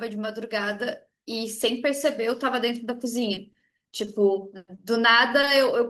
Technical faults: repeated packet loss (robotic sound); short concealed packet loss; short stall from a late packet

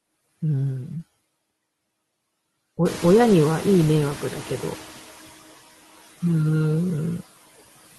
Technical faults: noise suppressor artifacts; noise suppressor catching up

